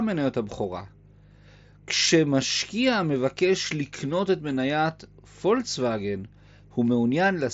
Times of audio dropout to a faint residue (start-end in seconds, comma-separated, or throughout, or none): none